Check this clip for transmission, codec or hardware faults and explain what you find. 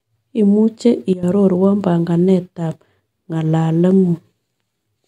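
One fault is present: a sudden gain jump. From 1.13 s to 1.23 s the speech and its background noise drop together by about 12 dB with no fade, then return. The likely cause is a digital gain setting or bit shift applied instantly rather than ramped.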